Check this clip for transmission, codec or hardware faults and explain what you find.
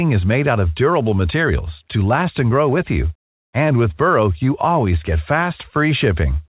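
Checking this clip turns up no faults to explain.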